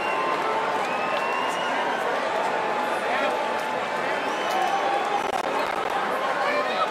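The audio carries a burst of processor overload crackle from 5.23 to 5.94 s. For about 0.7 s, the sound is torn by a gritty crackle. The playback chain could not finish its small audio buffers in time, and deadlines were missed one after another. Each missed buffer was left as silence, a gap of around 10 ms with hard edges. About fifteen such dropouts cluster in this stretch, so they fuse into one rough crackling tear that stops at 5.94 s.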